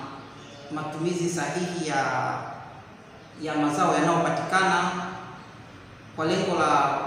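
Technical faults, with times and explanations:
4.56 s, dropped samples: a single sharp click. Likely about one sample is missing, so the waveform jumps abruptly to a later value.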